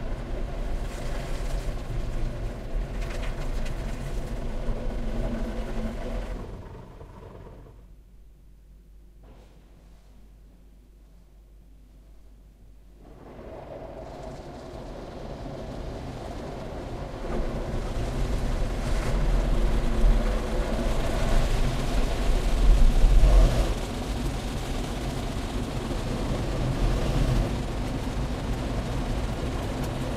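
No technical faults can be heard anywhere in this recording of sounds. Nothing in it calls for a time mark or a closer look.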